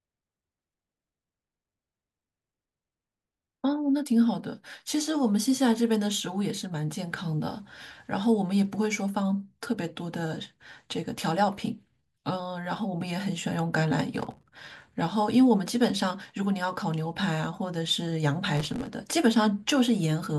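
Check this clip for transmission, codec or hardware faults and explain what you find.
Two bursts of processor overload crackle, at 14.20–14.95 s and 18.55–18.87 s. Dozens of tiny millisecond-scale buffers miss their deadline and drop to silence, producing gritty, tearing crackle over the speech.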